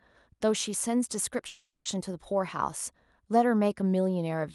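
At 1.47 s the speech stops and, instead of a gap, the last sound is stretched into a fading buzz-like tail that runs to 1.87 s, ending in about 110 ms of silence before the speech resumes. This is a call audio freeze, likely from delayed packets draining the jitter buffer. The receiver filled about 380 ms with concealment, then picked up where it left off. Nothing is lost, but everything afterwards arrives 380 ms later. The surrounding audio is band-limited near 12 kHz, consistent with Opus.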